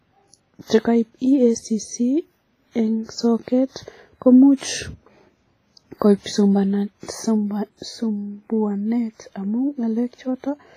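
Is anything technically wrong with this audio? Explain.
Yes, there are two faults.

Throughout the speech, a transform codec, likely WMA compression, appears to have run at a low bitrate, with heavy damage that points to roughly 24 kbps. It spreads quantisation noise across long blocks and zeroes weak detail, leaving a ringing, washy sound with hiss that breathes with the signal and nothing above 15.3 kHz.

From 4.57 to 4.61 s there is pre-echo. A sharp attack landed late in a coding block, so noise scaled for the loud onset spread about 47 ms backwards into the quiet moment before it. That gap fills with a short hiss, and the attack sounds softened and smeared.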